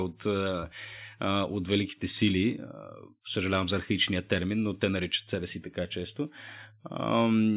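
A speech recording with no technical faults to point to. Nothing in it calls for a time or a cause to be given.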